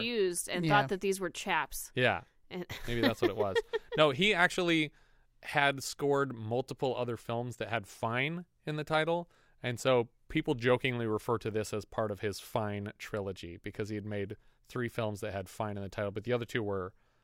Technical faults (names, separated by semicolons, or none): none